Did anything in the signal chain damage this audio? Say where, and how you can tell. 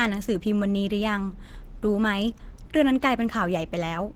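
Yes. Throughout the clip the speech has a hoarse, grainy roughness, clearly audible, even though energy still reaches about 20.2 kHz, so nothing sounds band-limited. That points to the codec stage, likely Opus compression at a low rate, around 16 kbps. At that rate Opus runs in its hybrid mode, combining its speech coder in the lower bands with coarsely quantised upper bands. Too few bits for the detail leave the speech rough and hoarse instead of clean.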